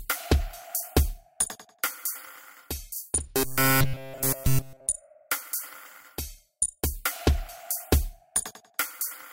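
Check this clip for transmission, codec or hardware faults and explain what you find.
There's one fault. From about 3.37 to 4.89 s the audio goes robotic, the classic sound of repeated short buffers. It's likely that new data stopped arriving in time, so the playback side kept looping the last tiny chunk while the real audio was skipped. Throughout that stretch essentially everything is repeats. The loop rate sets a rigid buzz at 133 Hz, which fits a buffer of roughly 7.5 ms, so the sound turns hard and metallic until normal playback returns.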